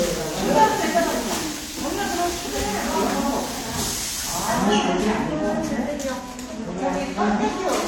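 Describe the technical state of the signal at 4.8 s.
At 4.8 s, as across the whole clip, the audio carries two layers of coding damage, likely from transcoding between lossy codecs: an AAC-style pass re-encoded with HE-AAC. Nothing remains above 18.4 kHz, and the artefacts from both stages sound together, unlike the single, uniform texture of one codec.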